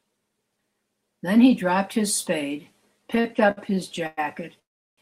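Speech, with repeated stalls (stutter) from 3.15 to 4.19 s: five brief holds totalling 231 ms, the longest 108 ms, as late packets drained the jitter buffer, so the audio drags without losing anything. A call audio freeze follows at 4.59 s, with 381 ms inserted, nearly all of it silence before playback resumes at 4.99 s. The likely cause is a single longer network delay that emptied the buffer.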